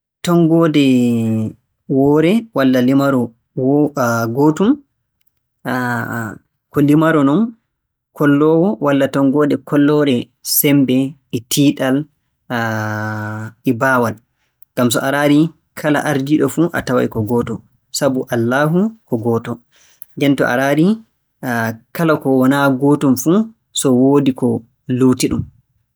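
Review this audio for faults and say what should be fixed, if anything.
The speech jumps about 6.4% faster and roughly a semitone higher at 5.74–6.65 s, 9.36–10.10 s and 19.41–20.24 s, then snaps back: likely a drift correction step. Keep the two devices on a shared clock, or use gradual resampling.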